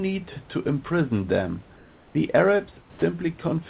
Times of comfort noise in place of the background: 1.76-2.15, 2.81-3.02

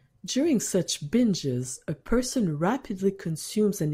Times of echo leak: none

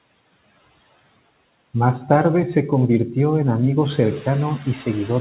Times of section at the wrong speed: none

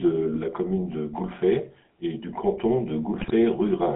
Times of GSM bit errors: 0.32-0.41, 3.14-3.34

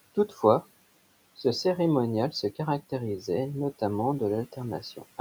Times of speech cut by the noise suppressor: 0.15-0.43, 4.81-5.19

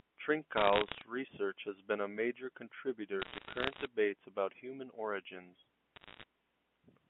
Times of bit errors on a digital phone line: 0.57-1.02, 3.20-3.85, 5.96-6.24

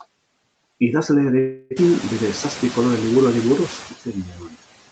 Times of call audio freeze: 1.39-1.73

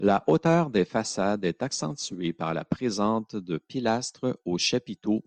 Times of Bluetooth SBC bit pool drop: 2.23-3.12

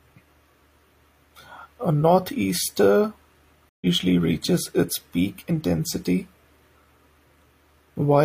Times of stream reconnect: 3.69-3.86

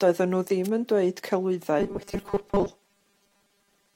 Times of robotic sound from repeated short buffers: 1.80-3.96

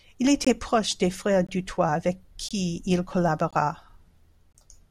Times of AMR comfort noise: none

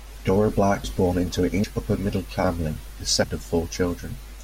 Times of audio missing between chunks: 0.84, 1.64, 3.24

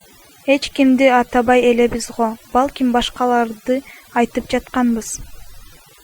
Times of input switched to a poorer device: none

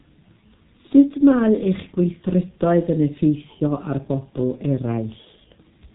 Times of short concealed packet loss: none

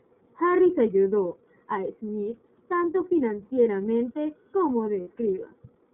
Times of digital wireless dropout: none

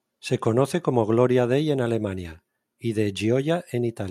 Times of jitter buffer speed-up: none

